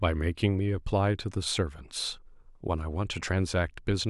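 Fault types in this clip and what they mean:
No technical faults are audible.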